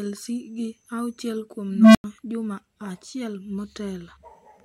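Speech, hit by an unstable filter from 1.69 to 2.04 s: a low tone near 200 Hz swells for 257 ms until it clips, then a 93 ms silence follows as the runaway filter resets. Unlike feedback howl, it stops dead rather than fading.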